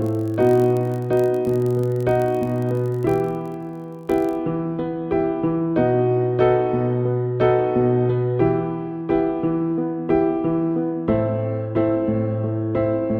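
From 0 to 4.43 s, a block size mismatch (padded) zero-fills each short block, which fits a 1024-sample read, adding a 46.9 Hz buzz at nearly unchanged speed.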